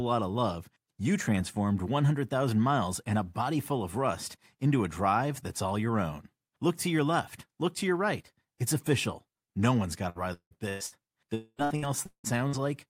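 From 10.09 to 10.95 s the speech turns choppy with repeated packet loss, the robotic-sounding kind. Four separate gaps land in under a second, the longest 176 ms. Each time the receiver papers over the hole by stretching the last bit of sound it had, so about 0.41 s of that stretch (nearly half) is patched-in filler rather than real audio, and the missing pieces never come back.

Then from 11.34 to 11.61 s the audio stops arriving altogether. You hear roughly a quarter second of the last sound being drawn out, followed by about 50 ms of silence before things resume, minus whatever was lost. That pattern points to a likely long network dropout rather than a string of separate small losses.

It picks straight back up into more repeated packet loss from 11.64 to 12.61 s. There are again four gaps, the longest again 176 ms, and about 0.35 s is concealed, roughly 38% of that span. It's the same chopped, patched texture as before, with a slightly smaller share of the audio replaced.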